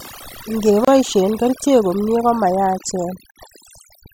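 Throughout the speech, overdone noise removal has gated individual frequency bands away along with quiet vocal detail, leaving a lowered background with twinkling specks. At 0.85 s, just before "kerichek komie", and again at 3.31 s, a gap at a join of encoded pieces opens gaps of about 29 ms and 50 ms, where separately encoded segments kept their start delay and end padding, with smeared edges.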